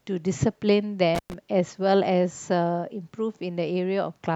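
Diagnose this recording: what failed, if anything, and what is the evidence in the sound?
The analogue wiring failed with an intermittent contact. At 1.15 s the speech cuts out, with crackle at the edge. The line stays open for 111 ms, leaving faint hiss. Crackle returns as it reconnects near 1.34 s. A loose plug or cable broke the circuit.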